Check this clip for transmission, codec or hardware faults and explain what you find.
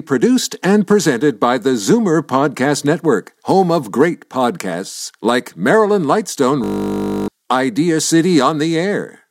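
One fault is present: a system hang loop from 6.64 to 7.28 s. A frozen system left the hardware replaying one 20 ms buffer, producing a steady 50 Hz buzz and losing most of a second of speech.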